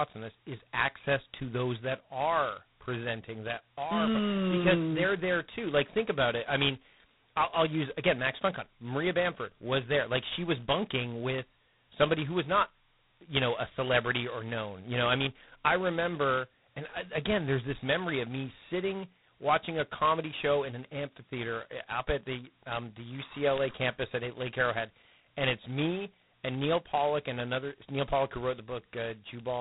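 From start to finish the speech carries a harsh, rasping hiss that rises and falls with the voice's level, and nothing above 3.9 kHz gets through. This is heavy G.726 ADPCM damage, and the coarseness fits the codec's lowest 16 kbit/s mode. The coder sends only two bits per sample to describe how each sample differs from its adaptive prediction, so large quantisation errors ride on the signal as level-tracking noise.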